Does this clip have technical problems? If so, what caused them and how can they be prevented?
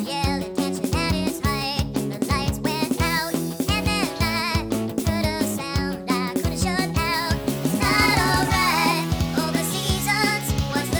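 Yes, a wrong sample rate throughout: everything runs 1.5 times fast and about 7 semitones high, which points to 32 kHz audio played at 48 kHz. Unlike a pitch shift, speed and pitch rise together. Prevent it by resampling or declaring the true rate at playback.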